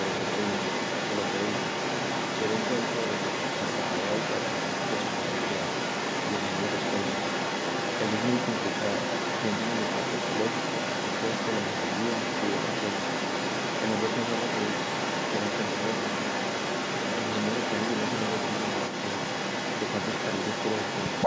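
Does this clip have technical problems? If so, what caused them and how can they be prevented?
Yes, an echo leak runs throughout, 0.0 to 21.3 s: a copy of the speech returns 184 ms late at roughly equal loudness, likely from a loudspeaker whose echo canceller failed. Using headphones on the far end or better echo cancellation prevents it.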